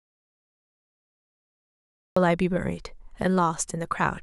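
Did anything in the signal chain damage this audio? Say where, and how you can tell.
Yes. The clip opens in dead silence, with no room tone at all, and speech only appears at 2.17 s, cutting in mid-flow. This audio dropout to silence was likely an input-side loss, a disconnected device or mute upstream, while the recorder kept writing silence.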